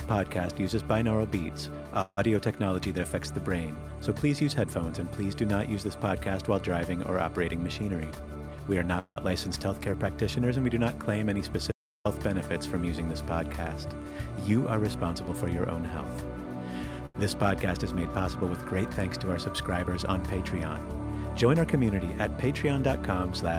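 At 2.01 s the sound stops moving forward and the last moment carries on as a fading buzz for about 158 ms, sinking to roughly 40 ms of near silence before the audio resumes at 2.29 s exactly where it left off. This is a call audio freeze: packets were likely held up in transit, the jitter buffer ran dry, and the receiver extended the final sound until delivery restarted, inserting a pause rather than losing material.

From 7.82 s to 8.86 s the audio hurries along at about 112% of normal speed with its pitch unchanged. This jitter buffer speed-up follows a backlog. The buffer held more audio than it aims for, so the receiver repeatedly trimmed out short slices a pitch period or so long, around 150 ms in total, to bring the delay back down.

A second call audio freeze follows at 8.99 s to 9.18 s. The held, decaying tone lasts about 173 ms and includes roughly 70 ms of near silence, again likely from delayed packets emptying the buffer, before playback picks up without a gap in content.

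At 11.72 s the sound cuts off into silence, with no room tone, until 12.05 s. This audio dropout to silence removes about 338 ms outright. The input was likely lost briefly and silence was written in its place.

A much gentler jitter buffer speed-up runs from 13.90 s to 16.83 s at about 101%, shaving off only a few tens of milliseconds, so the rush is barely perceptible.

At 17.06 s a short stall from a late packet holds one sound for about 84 ms with a faint buzzy dip. The receiver stretched what it had until the overdue packet arrived, then continued from the same point by 17.16 s.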